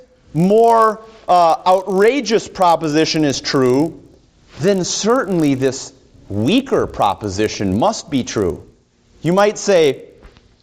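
The audio carries a steady buzz at 50 Hz from start to finish. It follows the signal and drops away when the sound stops. This is a resampler restarted on every block. Each 20 ms block was converted on its own, with no memory of its neighbours. The filter saw missing or wrong samples at every edge. That leaves a small error fifty times a second. The upsampling appears to be from 16 kHz to 48 kHz.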